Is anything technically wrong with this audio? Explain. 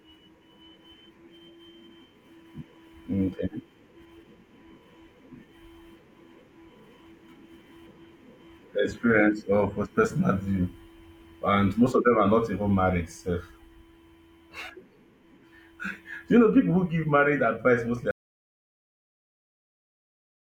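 Yes. There is an audio dropout to silence. At 18.11 s, right after "give marriage advice mostly", the speech cuts off mid-flow. From there to the end, about 2.3 s, there is silence with no room tone at all. The input feed was likely lost, through a disconnect, a failed link or a mute, while the recorder kept writing silence. Whatever followed in that stretch is gone.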